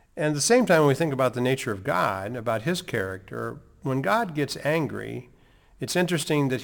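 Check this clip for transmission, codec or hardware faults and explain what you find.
One hardware fault is present.

Sample clock jitter runs from 0.60 s to the end of the clip at 6.63 s. The converter's clock wanders by around 10 microseconds, so each sample lands slightly early or late, and the error grows with the waveform's slope. The speech picks up a hissy roughness about 25 dB below the signal. It is strongest on loud, bright sounds and disappears in the pauses.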